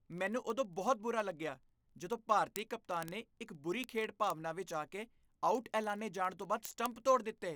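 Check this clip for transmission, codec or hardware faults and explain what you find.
One hardware fault runs through the clip. Word clock ticks from 0.12 s to 7.55 s: an unlocked receiver clock, off by roughly 700 ppm, slips one sample about every 0.03 s, giving around 300 steady, sharp ticks.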